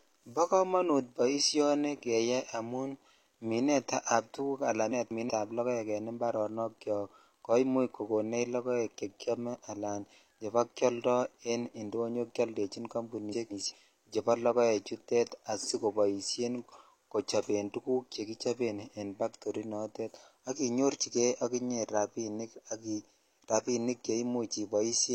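Frames out of order at 4.91–5.30 s and 13.32–13.72 s: two adjacent blocks of about 186 ms swapped, giving garbled flutter; spectrogram shows abrupt discontinuities at three joins.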